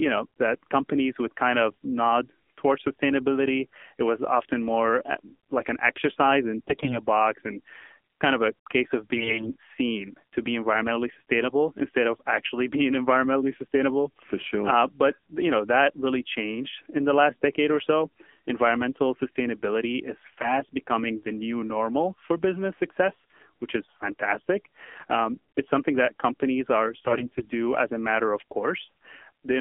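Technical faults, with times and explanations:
Throughout: AMR narrowband mobile codec. The speech passes only between about 250 Hz and 3.4 kHz, and the codec damage is plainly audible. Voices sound buzzy and synthetic, a level of degradation that points to a low mode around 7.4 kbps. The codec rebuilds each 20 ms frame from a vocal-tract model driven by a few pulses, so fine detail is replaced by a coarse approximation. A spectrogram shows a hard ceiling near 3.4 kHz with nothing above, a cleared band under 250 Hz, and smeared, blocky harmonics.
6.68–6.99 s, 9.16–9.56 s, 20.22–20.60 s, 27.07–27.47 s: AMR bit errors. These fall after "like an exercise in" and before "box and", after "of a case of" and before "seen to be environmentally", and just before "becoming the new normal". The fourth is at 27.07 s. Flipped bits in the less protected part of each frame misplace the excitation pulses and skew fine gain and spectral values. 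Pitch and loudness hold roughly steady, but the speech turns hoarse, scratchy and gargly. On a spectrogram the harmonic stripes break into noisy, ragged smears over each stretch, and the waveform looks jagged and irregular at a similar level.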